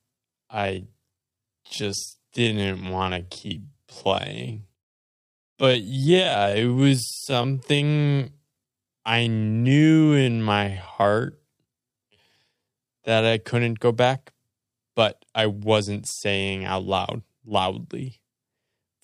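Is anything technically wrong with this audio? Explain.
Yes. From 0.0 to 13.32 s there is a time-stretched section: the speech runs at about 0.6 times its natural pace with unchanged pitch, likely from software repeating short pieces to lengthen it. It sounds dragging, with repeated grains in the waveform and horizontally drawn-out harmonics on a spectrogram, until the pace jumps back to normal.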